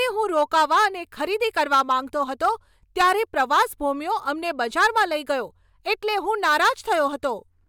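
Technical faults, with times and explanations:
0.37–0.86, 1.57–1.93, 2.44–2.49, 3.00–3.62, 4.61–5.04 and 6.44–7.00 s: hard clipping. Speech peaks overshoot the stage's limit by about 3 to 7 dB and are flattened, adding high harmonics heard as harsh, crackly fuzz.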